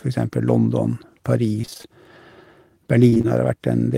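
From 1.61 to 1.85 s and again from 3.09 to 3.26 s, repeated packet loss (robotic sound) breaks the speech: holes up to 25 ms keep getting patched by repeating the previous sound, so about half of each stretch sounds choppy. The waveform shows a short regular pattern of repeated cycles, and the spectrogram shows smeared, stuttering bands.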